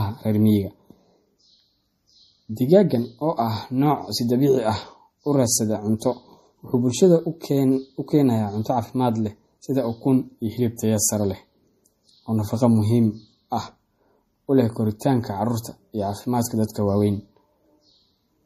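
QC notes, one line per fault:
throughout: MP3 compression. The speech sounds watery and swirly, sibilants come out metallic and chirpy, and consonant attacks smear. On a spectrogram the energy stops dead at a flat ceiling near 14.9 kHz, and the weaker high-frequency detail below it breaks into patches that blink on and off from frame to frame. That fits a lossy transform codec starved of bits, likely MP3 at a low rate around 40 kbps, cutting the treble and dropping the quieter spectral lines.
10.76–10.79 and 15.0: pre-echo. A brief hiss leads each sharp attack, lasting about 22 ms in the first case and about 18 ms in the second, so the onsets sound soft rather than crisp. On a waveform a thin smear of noise rises just before each transient. On a spectrogram it shows as a broadband haze in the quiet gap ahead of the attack. The codec spread quantisation noise sized for the loud onset across the whole block, including the silence before it.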